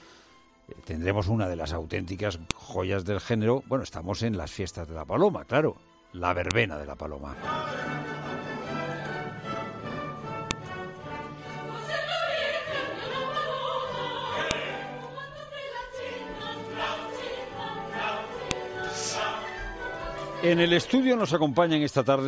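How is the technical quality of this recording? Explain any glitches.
The recording has one recurring fault: a file header played as audio, heard as sharp clicks at 2.51, 6.51, 10.51, 14.51 and 18.51 s. Pieces joined every 4 s kept their headers, whose bytes play as a loud snap, showing as a spike and a thin full-band vertical line.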